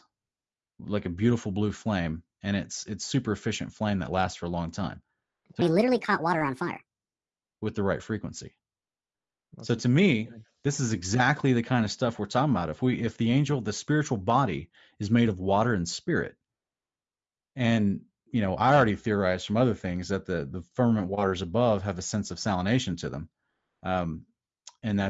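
From 5.62 to 6.86 s, after "a long time so", a wrong sample rate plays the speech 1.5 times fast, about 7 semitones high, which fits 16 kHz audio played at 24 kHz.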